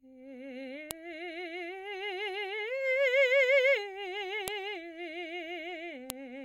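Sharp, loud snaps at 0.91, 4.48 and 6.10 s are a file header played as audio: joined pieces kept their headers, which play as samples, unrelated to the music, unlike clipping.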